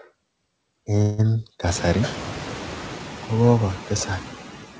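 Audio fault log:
throughout: noise suppressor artifacts. The background noise is pulled down by about 9 dB, band by band and frame by frame. It dips between phrases and swells back under speech. The room noise rises by about 22 dB near 1.5 s.
1.02–1.20 s: call audio freeze. For 0.16 s the last sound is stretched into a fading buzz rather than dropping to silence. Speech then resumes exactly where it stopped, so nothing is lost but everything after arrives 0.16 s late. Delayed packets likely emptied the jitter buffer.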